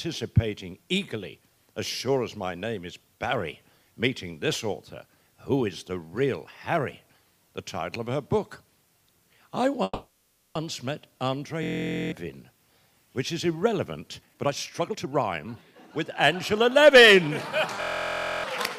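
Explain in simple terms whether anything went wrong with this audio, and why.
Three different problems can be heard.

From 9.83 to 10.57 s there is a call audio freeze, most likely caused by packets being held up in transit until the receiver's jitter buffer ran empty. The receiver filled about 720 ms by continuing the last sound as it faded, with a brief silence of about 20 ms. The audio then picks up exactly where it stopped, so nothing is lost; it simply arrives later.

At 11.63 to 12.12 s and again at 17.81 to 18.44 s there is a system hang loop. The computer stalled while the sound hardware kept replaying the same tiny piece of audio, about 23 ms long, which fits a 1024-sample buffer. Repeating 21 and 27 times, it becomes a steady buzz at about 43 Hz. Roughly half a second of audio is lost the first time and about 0.7 s the second.

From 14.19 to 17.57 s there is a jitter buffer speed-up. 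Too much audio had built up in the buffer, so the receiver cut out many tiny slices to catch up, about half a second in total. The sound plays at 116% speed without rising in pitch, so it comes across as hurried.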